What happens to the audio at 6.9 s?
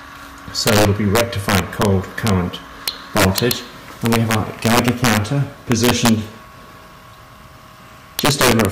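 Nothing goes wrong at 6.9 s; the audio runs through that point intact, with no dropout, click or distortion.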